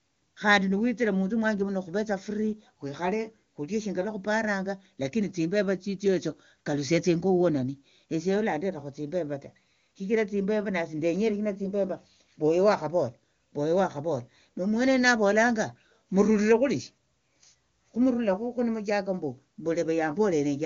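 Nothing goes wrong anywhere in this speech clip, and the AMR wideband (HD Voice) coding at 23.85 kbit/s leaves little more than a faint trace, if any.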